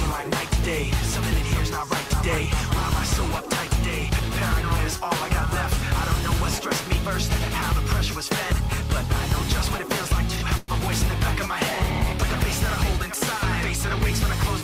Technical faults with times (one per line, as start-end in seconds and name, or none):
10.57-10.71 call audio freeze